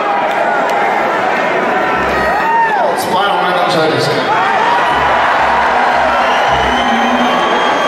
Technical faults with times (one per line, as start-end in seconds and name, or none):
none